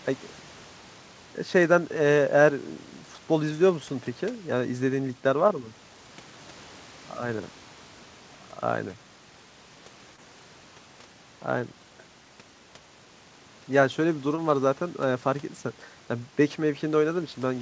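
At 10.16 s and again at 14.36 s there's a short concealed packet loss. About 20 ms of audio didn't arrive in time, so the receiver stretched the preceding sound over the gap, leaving a brief smear or wobble before blending back.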